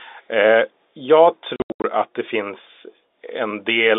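From 1.56 to 1.84 s the speech stutters through hard-edged gaps, 220 ms silenced across 280 ms: packet loss filled with silence, fitting 20 ms packets.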